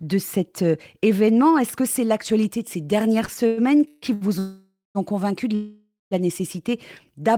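Repeated stalls (stutter) run from 3.25 to 4.24 s, after "l'actualité de ces dernières" and before "ont convaincu de". Packets arrived late, the jitter buffer ran dry five times, and the receiver stretched the last sound over each gap. The longest gap was 142 ms, and about 35% of the span is filled this way. Nothing is lost, but the speech drags and stutters.

A call audio freeze follows at 4.39 to 4.98 s, just before "ont convaincu de". The likely cause is packets held up in transit that emptied the buffer. About 560 ms is filled with a continuation of the last sound that fades into roughly 180 ms of silence. The speech then resumes where it stopped, now running 560 ms later.

A second call audio freeze comes at 5.55 to 6.14 s, after "ont convaincu de", and likely has the same cause. About 562 ms is filled, with the fading tail ending in about 170 ms of silence. Again nothing is missing, only delayed.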